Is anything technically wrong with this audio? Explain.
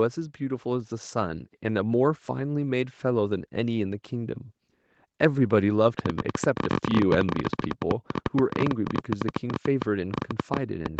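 Yes, two faults. From 0.38 s to 4.41 s, automatic gain rising: the gain control judged the input too quiet and raised it by about 6 dB, so speech and background swell together. From 5.99 s to the end, a train of clicks, likely from electrical interference or a faulty connection, adds about 14 pulses per second at uneven spacing, popping well above the speech even in pauses. The audio is band-limited to 8 kHz by the call path.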